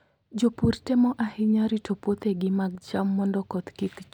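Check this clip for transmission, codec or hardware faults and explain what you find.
One channel drops out from 2.75 to 2.81 s in this speech clip. For about 60 ms the level falls abruptly by about 6 dB, then recovers just as suddenly. The likely cause is one stereo channel going silent briefly, so the mono sum loses half its shared content, heard as a sharp, short dip in loudness.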